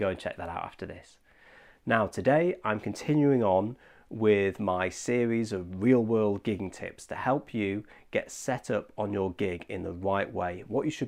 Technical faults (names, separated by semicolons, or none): none